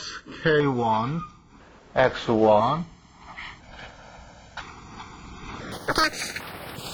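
From 5.72 s to the end at 6.94 s, the audio plays back at the wrong sample rate: the stored samples are clocked out far faster than they were captured, with no rate conversion. The sound runs about 2.76 times too fast and rises about 17.6 semitones, nearly an octave and a half, giving a shrill, chattering rush. That ratio fits material recorded at 16 kHz being played as if it were 44.1 kHz.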